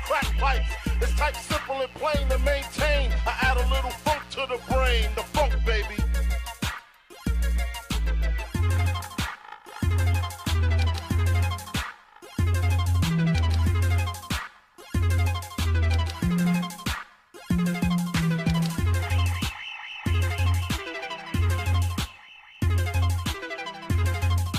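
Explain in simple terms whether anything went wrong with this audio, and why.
Between 1.15 and 5.50 s there's a mains buzz: a raspy, steady hum sitting under the sound. Electrical interference from something like a dimmer or poor shielding leaked in, spiking twice in each 60 Hz mains cycle.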